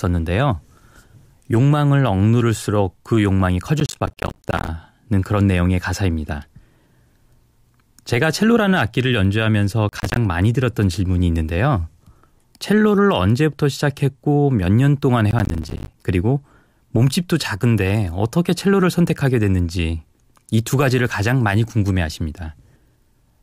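Gritty bursts of crackle tear through the speech from 3.8 to 4.68 s, 9.89 to 10.17 s and 15.31 to 15.94 s. This is processor overload crackle: an overloaded processor misses run after run of buffers of around 10 ms, and each missed buffer drops out as a hard-edged silent gap.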